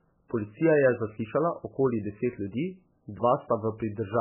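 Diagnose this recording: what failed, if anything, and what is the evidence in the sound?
Codec stage: nothing above 3 kHz for the whole speech clip, with a heavy watery swirl. That's likely MP3 compression at a very starved bitrate, around 8 kbps.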